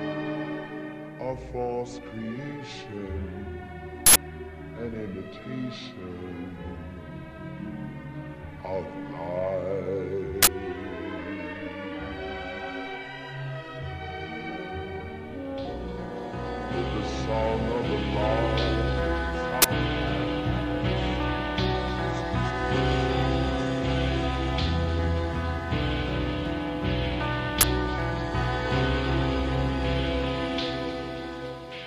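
Short bursts of digital noise break into the audio at 4.06 s (93 ms), 10.43 s (46 ms), 19.62 s and 27.61 s (23 ms each). These are uninitialised buffers: each block played before audio was written into it, so leftover memory came out as samples. The lengths fit buffers of 4096, 2048 and 1024 samples.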